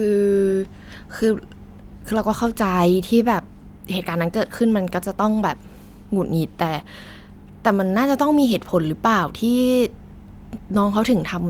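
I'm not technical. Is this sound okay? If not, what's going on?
Yes, this sounds fine.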